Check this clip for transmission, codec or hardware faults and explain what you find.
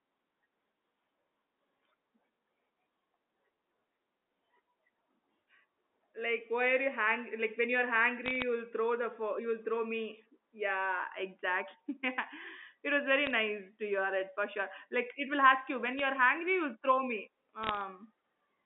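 Four short bursts of bit errors on a digital phone line: 8.26–8.42 s (after "hang like when you're"), 13.26–13.34 s, 15.99 s, and 17.63–17.81 s. Flipped bits in the G.711 stream, at a rate of a fraction of a percent, each corrupt one logarithmic sample and produce sharp ticks and crackle over the speech. On the waveform these appear as isolated single-sample spikes. On the spectrogram they show as thin vertical lines across the whole band up to 4 kHz.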